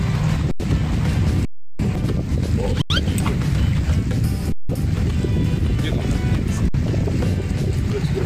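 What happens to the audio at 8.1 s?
Nothing goes wrong at 8.1 s; the audio plays through that moment intact, with no dropout, click or distortion.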